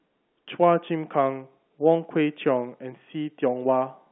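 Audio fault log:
No faults heard in this telephone-band speech.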